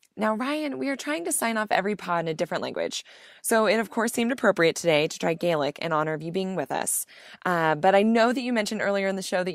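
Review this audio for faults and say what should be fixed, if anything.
Nothing stood out on listening to this speech, so there is nothing here that needs fixing.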